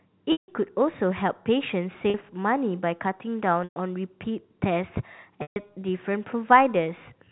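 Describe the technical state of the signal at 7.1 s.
At 7.1 s the audio is intact, with only the expected narrowband sound of G.711 telephone coding: nothing above 4 kHz and a faint, level-following quantisation hiss consistent with a 64 kbps mu-law line.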